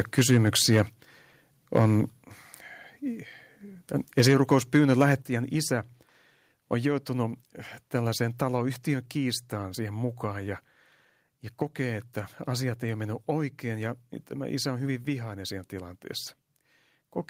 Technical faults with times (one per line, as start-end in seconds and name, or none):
4.18-5.12 microphone overload
5.22 microphone volume stepped down